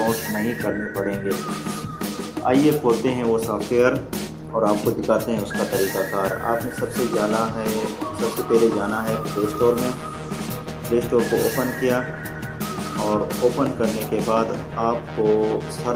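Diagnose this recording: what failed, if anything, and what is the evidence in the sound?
Nothing in the recording points to a failure at any stage of the chain. There is no audible evidence to diagnose, so no stage needs attention.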